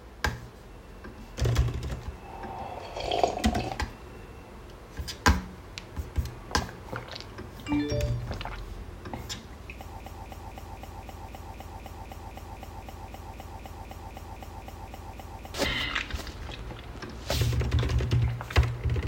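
The playback or stream likely stalled at 10.00 s and kept resending its last buffered fragment, producing a broken-record loop: a 0.26 s piece of sound repeats exactly, back to back, 22 times until 15.54 s, and the audio meant for that span is lost.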